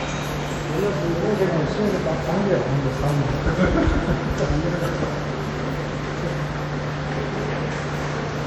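A stretch of everyday sound with a washy, ringing smear and hiss breathing with the signal throughout, likely WMA compression at a rate around 48 kbps.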